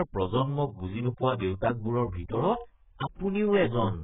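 Speech runs through the whole recording with AAC compression damage from start to finish. Nothing survives above about 3.8 kHz, so the sound is dull and boxed in. Sibilants lose their edge and turn fizzy. Sustained sounds warble and smear. The cause is likely an AAC-LC encode at a very low bitrate. The heavy damage fits something around 8 kbps. At that rate the encoder discards the upper band and quantises the rest coarsely, leaving gaps in the spectrum.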